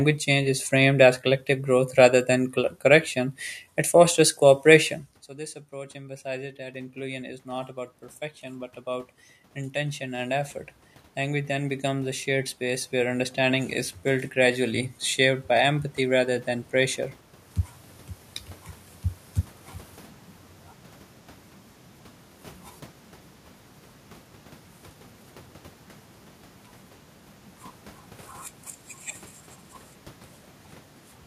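Starting around 5.7 s, just after the talker drifts away, the automatic gain control keeps rising: voice and room noise swell together over 5.7 to 7.77 s and 8.41 to 10.57 s (about 4–5 dB each, against an input drop of about 17 dB), then again from 11.16 to 14.9 s, just before "shaped by empathy rather".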